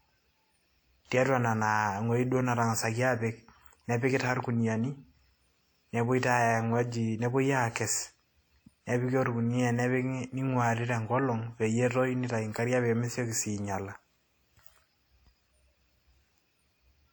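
WMA compression runs throughout the speech, likely from a transform codec whose long blocks smear quantisation noise over tens of milliseconds. The damage is plainly audible: ringing, washy detail and a hiss that breathes with the signal, which fits roughly 48 kbps, though content reaches 20.1 kHz.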